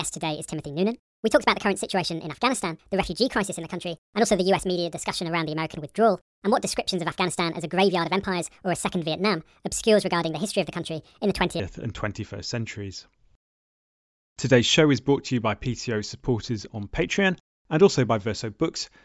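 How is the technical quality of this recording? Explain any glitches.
From 0.0 to 11.6 s the speech runs fast and high, at 1.5 times normal speed and about 7 semitones up. This is a wrong sample rate fault: the samples play back faster than they were captured, without conversion, which fits 16 kHz audio played at 24 kHz.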